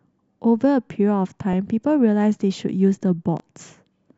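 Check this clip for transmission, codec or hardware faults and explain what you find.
Two faults are audible in this speech clip, one from the broadcast chain and one from the playback or recording path.

DAB burbling, at 1.53 s: weak reception let a small residue of bit errors, around a few hundredths of a percent, slip past error correction into the MP2 data. Corrupted samples and scale factors, which points to a few frames, make isolated sub-bands jump, giving a few brief watery blips.

Chunks out of order, from 3.37 to 3.40 s: a 10 ms chunk of audio was delivered two chunks late and played after the material meant to follow it. Nothing is missing, but the reordering creates three abrupt joins, heard as a tiny jumbled stutter.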